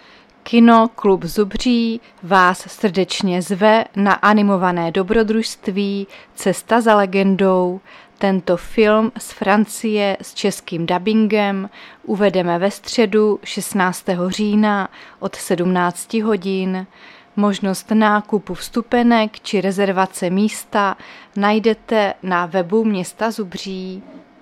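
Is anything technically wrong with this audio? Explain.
No, nothing technically wrong.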